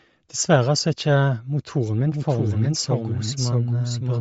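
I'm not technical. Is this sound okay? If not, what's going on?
No. Two separate problems can be heard.

The whole clip has the sound of Bluetooth LC3 compression, which was likely introduced by a Bluetooth wireless link. To send speech over that link, the audio was squeezed into a much smaller form, in short slices a hundredth of a second long. The squeezing is plainly audible. Everything above about 7.6 kHz is gone, so the speech sounds dull, and what remains has a breathy, grainy edge.

From 2.12 s to the end there is a doubled audio track. A second copy of the same speech plays along, somewhat quieter and about 0.7 s behind, so everything is heard twice in quick succession. This is not a room echo, because the copy is just as clear as the original and does not fade away. It also switches on suddenly. The likely cause is the sound being recorded a second time through a slower path, or an edit that left two copies misaligned.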